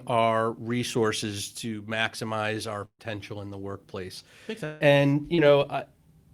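Speech is interrupted three times by network losses. At 2.85 to 3.01 s a burst of packet loss removes about 140 ms. The decoder stretches the last sound as a fading buzz or hiss that drops toward silence. Speech then resumes further along. From 4.65 to 4.82 s about 160 ms vanishes. The last sound is held and fades out, with no true silence, before the audio jumps ahead. A long network dropout is the likely cause. At 5.34 to 5.40 s a short concealed packet loss drops about 40 ms. The decoder fills the gap by continuing the previous sound and then blends back in. It is heard as a brief smear or wobble.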